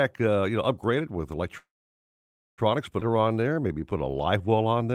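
At 1.57 s the speech stops and the gap runs to 2.60 s, about 1 s in all. This is a call audio freeze: a short tail of the last sound carries on briefly before the line goes silent for roughly 0.92 s. The likely cause is packets held up in transit, which let the jitter buffer run empty. When delivery resumes, the speech picks up exactly where it left off, so the gap is inserted and nothing is lost.

From 3.00 to 3.03 s there is a skip ahead. Playback jumps forward with almost no gap, and around 0.7 s of speech is simply missing. The two sides are joined nearly directly. This matches a stretch that was dropped in transit, or discarded when the jitter buffer overflowed, while later audio was already queued. It partly undoes the delay added by the earlier freeze.

From 3.10 to 4.91 s a jitter buffer slow-down stretches the speech by about 235 ms, so it runs at roughly 88% of normal speed while the pitch stays the same. 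The receiver is rebuilding its reserve by repeating single pitch periods and small fragments of pauses many times in a row. The result is drawn-out sounds over that final stretch.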